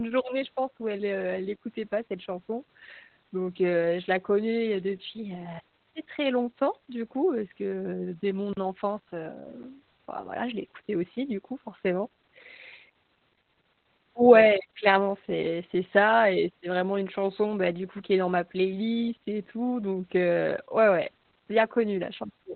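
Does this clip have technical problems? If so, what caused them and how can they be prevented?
Yes. Throughout the speech is muffled, hoarse and slightly robotic, with nothing above about 4.3 kHz: heavy Opus voice compression in its narrowband SILK mode, coarsely coding the excitation at a rate that points to roughly 8 kbps. Encoding at a higher bitrate, so Opus keeps wideband, prevents this.

From 8.53 to 8.57 s the sound drops out for 40 ms, cutting out and back abruptly. This block of digital silence was likely an output buffer that wasn't filled in time. A larger buffer or lighter processing load prevents it.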